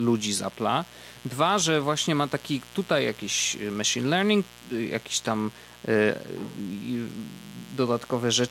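A speech recording carries mains buzz from start to finish. It is a steady, raspy buzz built on 60 Hz harmonics reaching into the kilohertz range, sitting about 25 dB below the speech. Sharp switching spikes from a dimmer, rectifier or unshielded cable are the cause.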